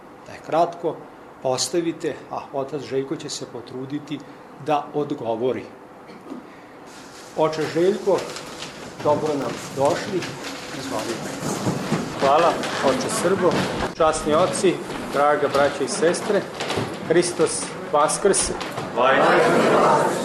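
A single burst of loose connector crackle runs from 9.41 to 9.46 s, a short irregular scratch over the sound. A worn or dirty contact briefly lost and regained connection, chopping the signal into fragments, with any DC on the line adding pops.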